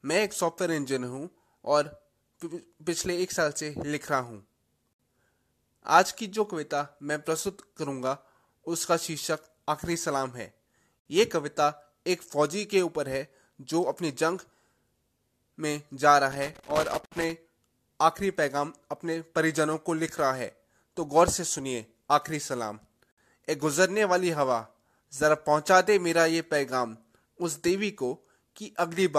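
At 4.93 s the speech drops out for about 62 ms. This is a gap at a join of encoded pieces. The audio was encoded in separate chunks and joined untrimmed. Each chunk's start-up delay and end padding became silence. The codec smears the edges.

The same gap returns at 10.99 s, about 60 ms long. It recurs every 6 s, which fits chunks 6 s long.

From 16.3 to 17.3 s comes loose connector crackle. A worn or dirty contact was making and breaking. The signal is chopped into irregular bursts of scratchy crackle. Inside this burst, at 17.06 s, another 60 ms join gap opens.

The last gap falls at 23.12 s, again about 60 ms. The speech resumes exactly where it stopped.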